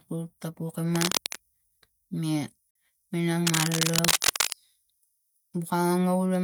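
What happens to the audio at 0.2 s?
Nothing goes wrong at 0.2 s; the speech plays through intact, with no dropout, click, distortion or glitch at that point.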